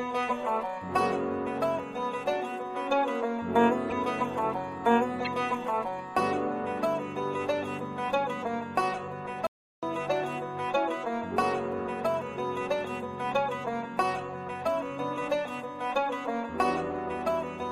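At 3.90 to 3.93 s there's a short chirpy blip, and another at 5.24 to 5.28 s. Both are corrupt frames that got decoded anyway. Bits in the compressed data were flipped, the decoder trusted the garbage gains and codes, and it sprayed energy into the wrong frequencies for a couple of frames each time. The first spike peaks around -20 dBFS and the second is a bit softer, around -25 dBFS.

Then at 9.47 s the sound just cuts out mid-flow and stays silent for about 360 ms, picking back up at 9.83 s. That's a playback stall. Most likely the player ran dry of buffered data or its thread got held up, so nothing reached the output until it recovered and carried on.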